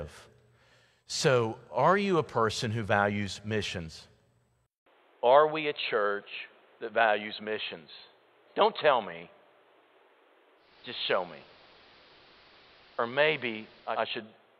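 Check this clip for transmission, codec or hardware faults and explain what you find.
Two faults are present: an input switched to a poorer device, and a digital radio blending to analogue, the two overlapping near the end.

Input switched to a poorer device, from 4.66 s to the end. The speech drops out for about 200 ms, then returns duller and boxier, at much the same level but over a faint new background noise well beneath the speech. The likely cause is the system changing its input mid-recording to another microphone or a headset's call profile, which passes a narrower band and brings its own noise floor.

Digital radio blending to analogue, from 10.56 s to 14.06 s. Over a 255 ms cross-fade the receiver loses the digital stream and falls back to the station's AM broadcast, then blends back to digital at 14.06 s. During that stretch a hiss sits about 30 dB under the speech, though the level itself does not change. 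AM's susceptibility to noise accounts for it.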